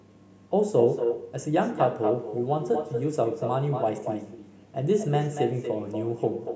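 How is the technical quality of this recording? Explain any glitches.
The speech is marred by an echo with no canceller running through the whole recording. A far-end loudspeaker fed the call back into a microphone, and nothing subtracted it. Every phrase returns about a fifth of a second later, only about 6 dB quieter and thinner. Unlike room reverberation, which smears into a diffuse tail, this is a distinct, delayed repeat of the speech. The sound carries nothing above 8 kHz, which fits ordinary call microphone processing.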